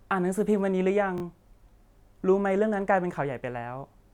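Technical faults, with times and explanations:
1.18 to 1.22 s, repeated buffer: fresh audio reached the output late, so the device replayed its last 20 ms block twice more. The speech halts in a brief stutter or buzz, each repeat meeting the previous one at a hard edge, with no sound skipped afterwards.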